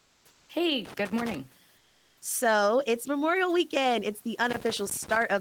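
Comfort noise in place of the background runs from 0.00 to 0.49 s. The real background, about 38 dB below the loudest speech, gives way to a steady, featureless hiss about 3 dB quieter. That pattern fits a sender that stopped transmitting during a pause in speech, with the receiver generating synthetic noise shaped roughly like the room until speech resumed, likely through Opus discontinuous transmission.

Loose connector crackle follows from 0.85 to 1.37 s. A worn or dirty contact is making and breaking rapidly, chopping the signal into an irregular burst of scratchy crackle.

Comfort noise returns from 1.77 to 2.21 s. For those 440 ms the background, about 37 dB below the loud parts, is again swapped for smooth, detail-free noise. This time it sits about 7 dB lower, while the room noise around it stays about 35 dB below the speech.

Loose connector crackle comes back from 4.50 to 5.23 s, starting just after "it's the". 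The same intermittent contact breaks up the signal into a rough burst of crackle lasting about 0.7 s.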